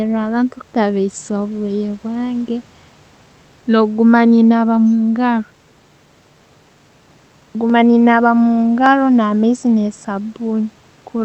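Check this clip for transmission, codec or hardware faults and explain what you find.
Two short clicks stand out, at 7.70 s, just before "ne naaba", and at 8.86 s, just after "ne naaba". Both are dropped samples. The likely cause is a fraction of a millisecond of samples going missing, so the waveform jumps straight to a later value. That step is heard as one sharp tick and seen as a thin vertical line in the spectrum. A dropout would leave an audible gap of silence and a lost packet would smear or muffle a syllable, but here no sound is missing at all.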